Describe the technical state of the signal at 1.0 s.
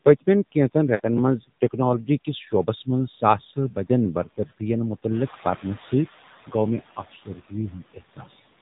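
At 1.0 s the signal is inside a run of lost AMR speech frames, from 0.96 to 1.01 s, right after "پٔتۍمین کینژن". The decoder repeats the last good pitch and vocal-tract settings with falling gain over about 40 ms, which fits two 20 ms frames. The sound is drawn out and dips, and the voice comes back weak or rough for a moment. On a spectrogram the harmonics run flat and fade. On the waveform the envelope sags.

The AMR narrowband mobile codec is also present here. Nothing passes above 4 kHz, so the spectrogram shows a hard ceiling at that line. The low bitrate, consistent with the 7.4 kbps mode, leaves the sound buzzy and synthetic.

Noise suppressor artifacts are present too. Steady background noise is pulled down by about 13 dB frame by frame. On a spectrogram it shows as speckled, patchy noise between the speech energy instead of an even floor.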